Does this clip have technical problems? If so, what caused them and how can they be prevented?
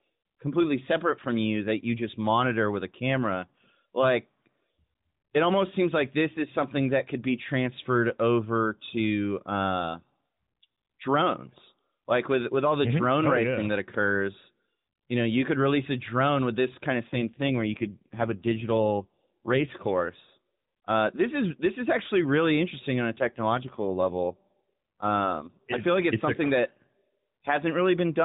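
Yes, there are two AMR rate drops, from 17.10 to 19.74 s after "with this kind of" and from 23.18 to 25.84 s before "like it's it's something". The voice goes buzzier and more synthetic without losing band or gapping, which fits a weak link pushing the codec from 12.2 to 5.9 kbps. Better signal or a wideband codec would prevent it.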